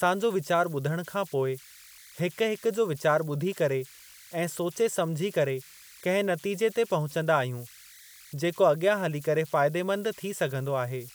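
Converter idle tones run throughout the speech. An undithered delta-sigma converter settles into repeating bit patterns on low-level input, producing a tone around 2 kHz in the pauses and grainy noise under quieter passages, sitting about 24 dB below the signal.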